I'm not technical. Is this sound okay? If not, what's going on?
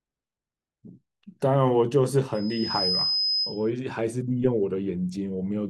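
No. From 2.34 to 3.71 s there's loudspeaker feedback squeal: the microphone hears its own loudspeaker and re-amplifies one pitch, near 5.1 kHz, which swells over about half a second to roughly speech loudness. Unlike a steady whistle, it grows by itself.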